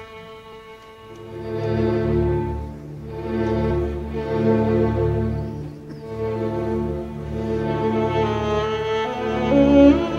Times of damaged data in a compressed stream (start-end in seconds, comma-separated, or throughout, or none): 0.51, 3.69, 9.13